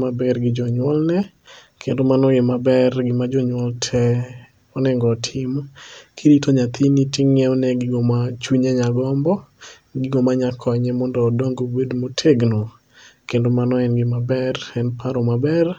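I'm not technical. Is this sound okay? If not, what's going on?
No. Between 1.23 and 1.68 s, right after "maber gi jonyuolne" and before "kendo mano e maber", the speech breaks into a gritty crackle. This is processor overload crackle: the computer was too busy to deliver each tiny slice of sound on time, and about ten slices came out as silence. The gaps are very short, around 5 ms each, which fits a small buffer. Unlike a single dropout, it's a rapid cluster of tiny gaps that crackles instead of going quiet once.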